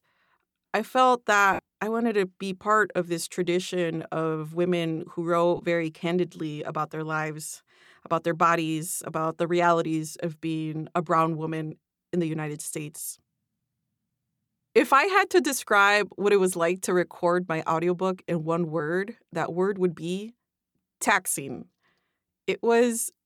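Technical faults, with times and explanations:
1.53 to 1.59 s, lost LE Audio frames: After "I felt", a 52 ms gap becomes a noisy smear. The decoder repeated the last spectrum with random signs, which fits seven 7.5 ms frames.
5.57 to 5.60 s, lost LE Audio frames: After "tradition of women who", 22 ms turns briefly hissy. The decoder reused the last spectrum with scrambled signs.
12.96 to 12.98 s, lost LE Audio frames: A 15 ms blur, concealed the same way. Light lossy compression is also present.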